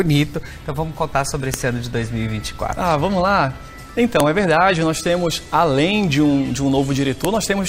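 Separate WAV pieces were joined without stripping their headers, so each header's few dozen bytes play back as samples: a file header played as audio. It sounds as a sharp, loud snap at 1.54, 4.20 and 7.25 seconds, marking each new piece regardless of the underlying sound.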